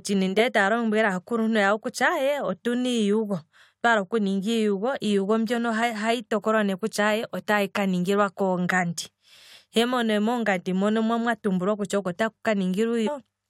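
At 5.82 s and again from 13.06 to 13.08 s the speech is broken by a brief chirp, squawk, click or short hole, the sign of damaged data in a compressed stream: corrupted bytes make the decoder misread those frames and lose sync until it finds the next valid frame header.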